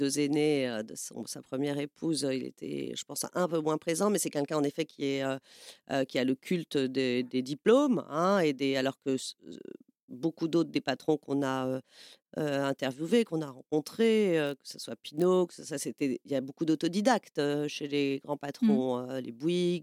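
Speech, with a block size mismatch (padded) from 14.45 to 15.25 s: each block read ends in zeros, giving a 46.9 Hz buzz that fits 1024-sample blocks. Speed and pitch stay essentially normal. A waveform shows evenly spaced dropouts, and a spectrogram shows regular vertical gaps.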